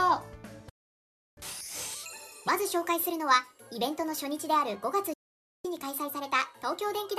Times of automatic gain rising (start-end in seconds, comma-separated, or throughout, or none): none